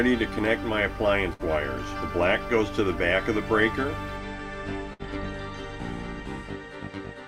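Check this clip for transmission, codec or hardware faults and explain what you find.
There are two bursts of packet loss. The first runs from 1.33 to 1.42 s, the second from 4.93 to 5.02 s. Each time, a run of packets failed to arrive in time to play. The receiver covered about 60 ms by repeating the last sound and fading it down. The result is a brief held buzz or fading hiss. Then the audio jumps ahead, with about 60 ms of the original sound lost.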